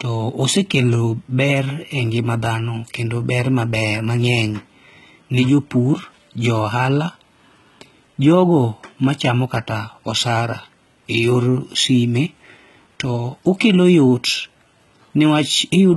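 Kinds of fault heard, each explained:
HE-AAC compression: heavy damage throughout, likely from HE-AAC at a bitrate around 16 kbps. The treble is rebuilt by copying lower bands upward rather than coded directly, so s sounds turn gritty and lispy, harmonics misalign, and nothing sounds above about 11.8 kHz.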